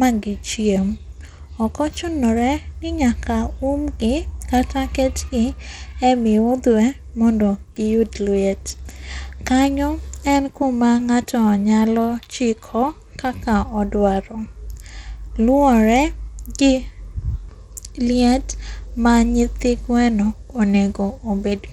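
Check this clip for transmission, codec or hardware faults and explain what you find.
One fault runs through the whole recording: the speech carries plainly audible codec damage, likely from Bluetooth SBC compression. SBC splits the signal into a few wide sub-bands and hands out bits with no model of hearing; at a rate that fits roughly 96 kbps, the upper bands starve. The treble flickers in and out, and a gritty, grainy noise with aliasing sits on the speech from start to finish.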